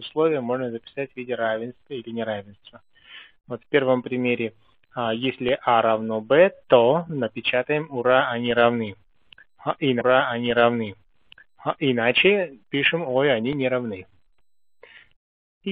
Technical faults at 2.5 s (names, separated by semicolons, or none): none